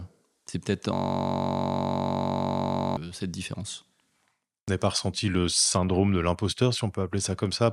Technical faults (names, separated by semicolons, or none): system hang loop